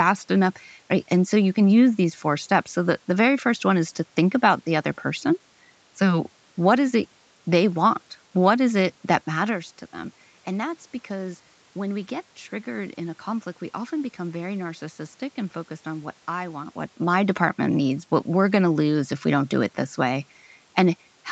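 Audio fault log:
The speech signal carries no technical faults, with the call microphone processing limiting the band to nothing above 8 kHz, room noise audible behind it, and level shifts around 9 s and 16.5 s that come from the talker moving relative to the microphone.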